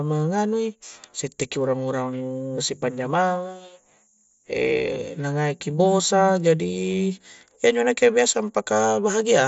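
Nothing here counts as a fault: the speech comes over a Bluetooth mSBC headset link at about 61 kbps, which holds the audio to roughly 8 kHz and adds a light grain on the louder moments, all as that codec normally sounds.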